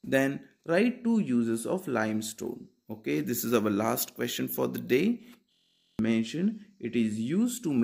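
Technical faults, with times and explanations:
5.53–5.99 s, system hang loop. The system stalled while the sound hardware kept replaying one ring buffer. A 23.22 ms slice repeats 20 times, so it buzzes steadily at 43.1 Hz. That length fits a 1024-sample buffer. About half a second is lost.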